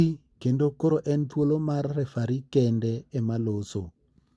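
No technical faults can be heard anywhere in the speech.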